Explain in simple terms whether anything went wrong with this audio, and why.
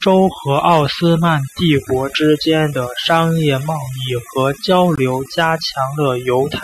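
Overdone noise removal runs through the whole speech clip. A noise reduction tool was pushed too hard: whenever a narrow slice of frequencies sat close to what the tool judged to be background noise, it turned that slice almost off. The quieter parts of the voice were caught too, and the background between phrases drops and breaks up into small twinkling specks.

A gap at a join of encoded pieces appears from 4.96 to 4.98 s, right after "贸易和交". The recording was compressed in separate chunks and then stuck together without trimming the extra bits each chunk carries at its edges. That leaves a brief hole of about 20 milliseconds, with softened edges, where the sound drops out before carrying on exactly where it stopped.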